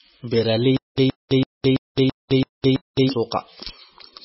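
From the start to the end of the speech, the sound is watery and swirly. Nothing is heard above 5.6 kHz. This is likely MP3 compression, and the codec damage is heavy. The sound fits a very low bitrate, around 16 kbps. With so few bits, the encoder drops weak frequency lines. Those lines flicker on and off from frame to frame. It also cuts the treble at a fixed point, so the top end is gone.

From 0.77 to 3.09 s there is a stutter with silent gaps. A 120.7 ms burst of sound repeats 7 times. Each burst is followed by 211.86 ms of silence, so it returns every 332.56 ms at an even pace. The likely cause is a stalled player or stream. At each retry it replayed the last fragment, then ran empty. The audio meant for that span is lost.

Pre-echo occurs three times: from 1.95 to 1.97 s, 2.62 to 2.64 s, and 2.94 to 2.97 s. It spreads over 26, 24 and 28 ms. A short hiss comes just before each sharp attack, and the attack sounds smeared. 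The codec spreads its quantisation noise across a whole block. When the attack falls late in the block, that noise also fills the quiet moment before it.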